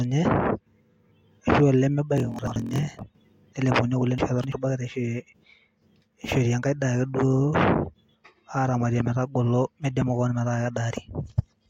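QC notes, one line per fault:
2.16–3.03 s, block size mismatch (padded): after "ashu aa", shorter blocks padded into 1024-sample reads leave gaps, giving a 43.1 Hz buzz and speech slowed to 0.938 speed.
2.39–2.56 s, chunks out of order: one 85.33 ms chunk played a chunk late, scrambling a brief moment across the hard joins.
4.18–4.52 s, chunks out of order: after "nlepuni ake kule", an 85.33 ms chunk lands three chunks late, so the passage sounds jumbled.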